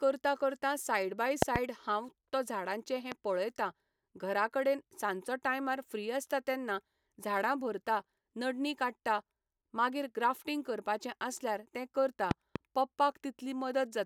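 Three bursts of loud popping cut through the speech. The first, from 1.42 to 1.58 s, is a quick double pop peaking around 25 dB above the speech. A single one follows at 3.12 to 3.14 s, about 15 dB up. Another double, roughly 20 dB over, lands at 12.31 to 12.58 s. The speech carries straight on underneath each one, which points to a likely voltage spike from a plug, switch, static or driver glitch riding on the signal.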